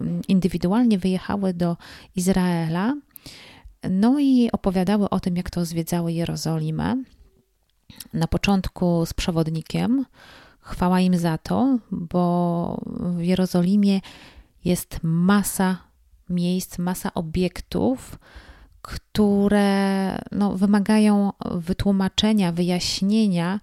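No technical faults can be heard in this recording.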